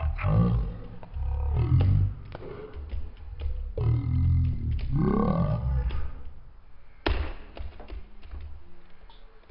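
From start to finish the sound is drastically slowed and dropped in pitch, running at one third of its proper speed and sitting about 19 semitones low, so everything drags and booms. This is a wrong sample rate fault: material captured at 48 kHz is being played back at 16 kHz without any conversion, so the rate mismatch stretches time and lowers pitch together by the same factor of three.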